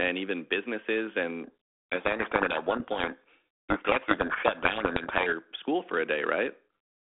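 From 1.44 to 5.33 s, after "even businesses", a codec payload misread buries the speech in harsh distortion. The G.726 bit order is swapped, and normal sound returns at "school for a".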